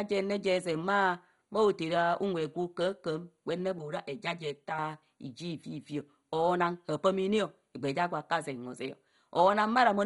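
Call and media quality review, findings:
Dull, gurgling, granular speech throughout, with nothing above 11.2 kHz. Likely MP2 compression at a low rate, fitting roughly 56 kbps, with heavy damage: upper sub-bands switched off, remaining bands coarsely quantised and flickering. Unlike comb filtering, present constantly, grainy rather than hollow.

3.79 to 4.79 s: hollow, phasey colouration, fixed spectral notches starting around 100 Hz and evenly spaced above. Channel delay (comb filtering): one channel about 5 ms late, summed to mono, cancelling shared content. Distinct from codec damage: static notches, no gurgle, confined to one second.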